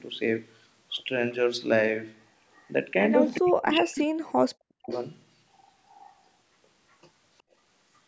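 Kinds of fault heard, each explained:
Echo leak: A faint delayed copy of the speech, trailing by 369 ms and roughly 25 to 35 dB below it, surfaces in short scraps at 2.53, 3.32, 4.90 and 5.88 s, likely loudspeaker pickup that the far end's echo canceller did not fully remove.
Speech suppressed in double talk: The speech drops by up to about 40 dB from 3.37 to 4.24 s and again from 4.64 to 4.90 s, roughly 1.2 s in total, likely because the echo canceller could not separate local talk from echo and attenuated both.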